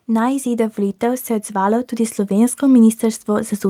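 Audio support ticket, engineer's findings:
Automatic gain rising, 0.05 s to 3.58 s. Voice and background swell together by about 8 dB across that span. Probable component: AGC stage on capture input. It judged the level too quiet and ramped gain up gradually.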